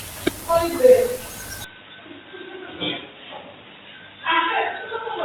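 At 1.64 s the speech turns abruptly dull and boxy, with no gap, until the end, likely an input switched to a poorer device. A spectrogram shows a hard ceiling at 3.8 kHz; the waveform drops by about 5 dB in level over a faint new noise floor.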